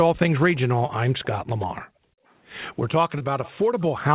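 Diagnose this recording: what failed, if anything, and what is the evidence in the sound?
Network stage, short concealed packet loss: at 0.86 s and again at 3.18 s, about 20 ms of audio failed to arrive, and the receiver bridged each gap by extending the preceding sound for roughly 20 ms before crossfading back. You hear a brief smear or wobble. On a waveform, the patch shows repeated, slightly decaying cycles. On a spectrogram, it shows as a frozen, blurred slice where harmonics stop evolving.

Call processing stage, background gated by the echo canceller: from 1.85 s to 2.26 s, roughly 0.4 s, the canceller clamped the microphone while far-end audio played. The room sound dips by up to about 39 dB, then returns. On a spectrogram, the background noise floor blanks out across the band, and on a waveform, it collapses toward silence for that span. All of this sits inside a band that stops at 4 kHz, which fits a 64 kbps G.711 mu-law call.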